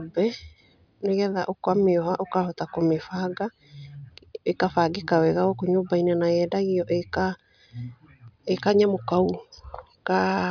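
Nothing in this bit of speech stands out as a technical fault at any point, so there's nothing to flag here.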